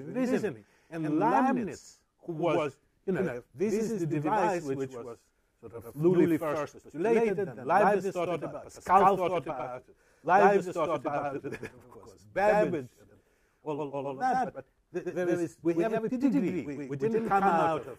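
The whole clip carries a doubled audio track: a second full-band copy, about as loud, trails roughly a tenth of a second behind. It's likely a duplicated capture path.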